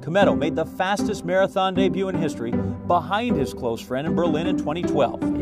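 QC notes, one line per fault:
No faults to note.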